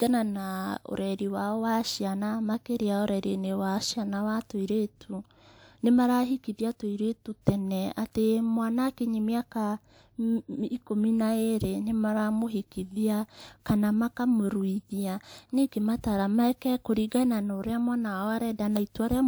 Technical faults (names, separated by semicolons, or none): none